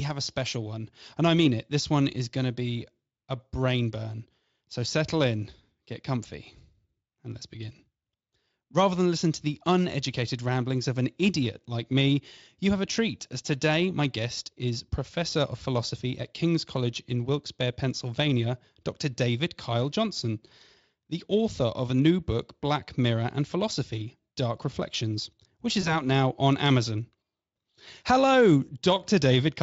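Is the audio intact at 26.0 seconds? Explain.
No: VoIP packet loss concealed by the speech codec spans 25.81–26.04 s, before "now on". The decoder extrapolated its last pitch and filter through what sounds like one lost 20 ms frame, leaving a fading buzzy or noise-like smear that recovers over the following frames.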